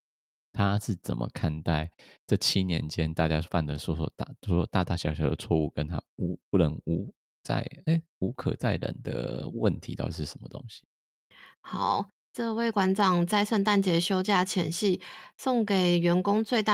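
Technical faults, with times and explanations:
No technical faults can be heard anywhere in the speech. Nothing calls for a time or an explanation.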